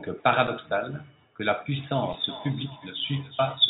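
At 0.47 s the speech briefly freezes for 5.8 ms, a tiny flat hold with only a soft edge. This is an underrun with held sample: the output buffer ran dry and the converter held its last value. The gap fits a 256-sample buffer, and playback resumes where it left off, so nothing is skipped.

From 1.93 s to the end, the speech comes back as a thin, ringing repeat roughly every 0.4 s, peaking at about -13 dB below the direct sound. This is feedback echo between two devices. One device plays what the other's microphone sent, that microphone picks it up again, and neither echo canceller removes the other device's output.

At 2.13 s, within that echo, a second underrun with held sample produces the same soft 5.8 ms freeze, again with no audio lost. Throughout, the band tops out at 4 kHz, as expected from the G.711 call codec.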